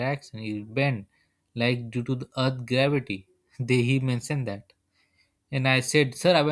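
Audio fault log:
Nothing stood out on listening to this speech clip.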